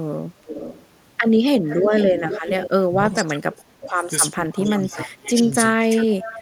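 Echo leak at 0.46–0.87 s and 1.65–2.7 s: a copy of the speech trails about 444 ms behind, about 10–15 dB down. This is likely loudspeaker pickup that the echo canceller failed to remove.

Speech suppressed in double talk at 2.87–4.06 s and 4.35–5.49 s: the talker drops by up to about 25 dB, in pieces totalling roughly a second each time. This is likely the canceller attenuating everything while both sides overlap.

Echo leak returns at 4.53–5.02 s, delayed about 514 ms and about 15 dB down.

Speech suppressed in double talk recurs at 5.74–6.41 s, dipping about 20 dB, with a brief echo leak at 6.21–6.4 s.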